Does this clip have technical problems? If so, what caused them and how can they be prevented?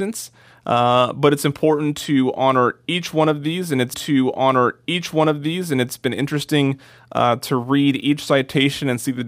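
Yes. Right after "of these and it's", at 3.93 s, a stream segment repeated: the player fetched or queued the same chunk twice, so about 2.0 s of speech plays again until 5.92 s, with a small blip at the jump back before "been interesting uh to" resumes. Unlike a buffer-underrun stutter, which loops a few milliseconds, this replays a whole segment-length passage intact. Tracking segment sequence numbers in the player and discarding duplicates before playback prevents it.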